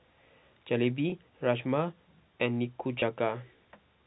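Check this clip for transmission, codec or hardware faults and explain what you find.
Two short transmission faults are present. Packet loss with pitch repetition occurs at 1.10–1.12 s and again at 3.00–3.02 s. Each time about 20 ms of audio never arrived, which points to a single lost packet, and the receiver bridged the gap by repeating the last pitch period. Because the gaps are so short, each is heard as a slightly held, buzzy sustain in the speech rather than a dropout. The G.711 telephone coding carrying the call, which removes everything above 4 kHz, is not itself a fault.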